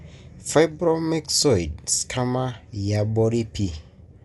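Throughout the speech, the band stops at about 11.5 kHz, leaving the sound dull, with a rough, fluttering noise around tonal parts. This is likely Dolby Digital compression at a low bitrate, consistent with 64 kbps, where starved frequency lines get filled with noise.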